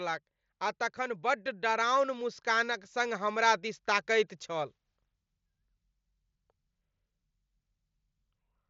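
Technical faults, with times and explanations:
0.96 to 4.77 s, automatic gain rising: the gain control judged the input too quiet and raised its level steadily over nearly four seconds, by about 7 dB, so the speech and the background noise swell up together rather than the speech alone, all heard through the mSBC headset link's band that stops near 7.7 kHz.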